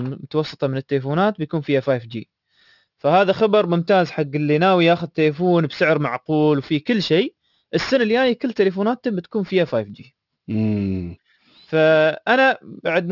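Aliasing runs through the whole speech clip. The audio was downsampled without a proper anti-alias filter, which fits a drop to a 12 kHz rate. Content above 6 kHz folds back below it, roughly 25 dB down. Sibilants sound gritty and metallic.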